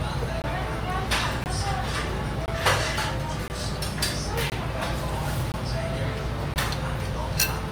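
Short, hard-edged holes of silence, each 20 ms long, cut into the sound at 0.42–0.44, 1.44–1.46, 2.46–2.48, 3.48–3.50, 4.50–4.52, 5.52–5.54 and 6.54–6.56 s. This is a gap between chunks. The audio was delivered in 1.0 s blocks, and silence was inserted at each join, so nothing is lost but the flow breaks every 1.02 s.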